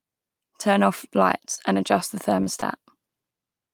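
Three brief gaps in the packet stream left the decoder without audio in time, each a short concealed packet loss of about 20 ms. The receiver covered each hole by extending the preceding sound and then crossfading back into real audio. This is heard as a quick smear or wobble at 1.55 to 1.59 s, just before "adjust the", and at 2.43 to 2.48 s and 2.60 to 2.63 s, both just after "adjust the".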